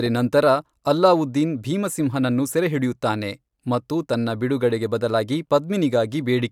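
No technical faults are audible.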